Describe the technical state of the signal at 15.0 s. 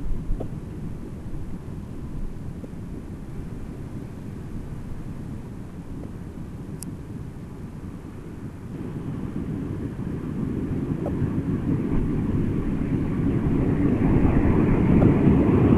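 At 15.00 s there is damaged data in the compressed stream, lasting until 15.03 s. Some bytes in the coded frames were corrupted. The decoder misread them, lost sync and searched for the next valid frame header. The result is a brief chirp, squawk, click or short hole.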